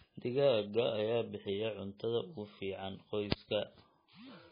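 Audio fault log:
Throughout, MP3 compression: nothing sounds above 5.1 kHz, and the speech turns heavily watery and swirly with smeared attacks, likely from an MP3 encoder starved of bits, which fits a rate near 16 kbps. A plain low-pass filter wouldn't make weak frequency lines flicker frame to frame.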